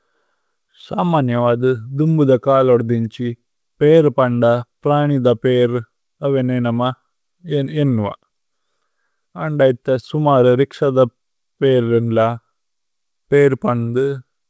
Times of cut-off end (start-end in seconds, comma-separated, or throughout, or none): none